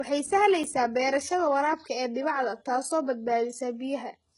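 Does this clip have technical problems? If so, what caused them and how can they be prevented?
Yes. Across the whole clip the speech has a gritty, metallic treble: s sounds come out lispy and smeared, the top end sounds synthetic rather than natural, and nothing is present above 11 kHz. This is likely HE-AAC compression at a very low bitrate, around 12 kbps. The codec encodes only the lower spectrum and fills in the highs by copying lower bands upward under a coarse envelope, so the rebuilt harmonics don't align with the real ones. Encoding at a higher bitrate, or with plain AAC instead of HE-AAC, prevents this.

At 0.64 s there is a brief tick where the audio drops to dead digital silence for about 5 ms and snaps back. This is a block of digital silence. A chunk of samples was output as zeros, most plausibly because the audio process didn't fill its output buffer in time, and the gap's length fits a 256-sample buffer. 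The abrupt cut to zero and back, with no fade, is heard as a tick. Using larger buffers or giving the audio thread higher priority prevents such underruns.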